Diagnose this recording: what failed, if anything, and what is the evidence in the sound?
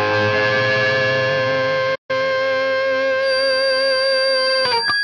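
Playback stall from 1.95 to 2.11 s: the output goes silent for about 140 ms, likely a playback buffer running dry, then the sound resumes.

Feedback whistle from 3.18 s to the end: a thin 4.7 kHz tone sits just under the sound, likely a speaker-to-microphone loop hovering at the edge of runaway.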